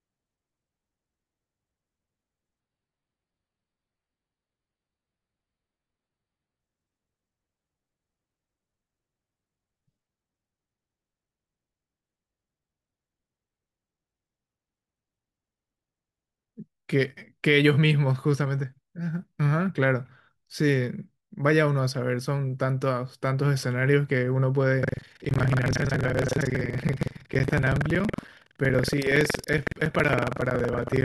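From 2.6 to 6.6 s the speech abruptly turns smeared, with codec artefacts and no gap, an adaptive stream at a lower bitrate, consistent with a drop from about 96 to 16 kbit/s AAC. From 24.8 s to the end, a robotic 21.5 Hz buzz rides on the speech. This is buffer tearing: writer and reader overlap, so roughly a third of each 2048-sample buffer replays audio about 150 ms old.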